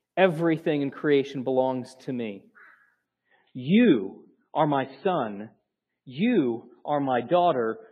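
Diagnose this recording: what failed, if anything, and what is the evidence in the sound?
The failure is in the network stage: an adaptive stream at a lower bitrate. At 3.06 s the speech suddenly loses its top end, with nothing above about 4.6 kHz, and stays thin and swirly, with coarse codec artefacts to the end. That fits the player switching from a roughly 128 kbit/s MP3 rendition to about 16 kbit/s as throughput fell. The seamless, gapless step change sets it apart from packet loss, and the added artefacts rule out a simple low-pass filter.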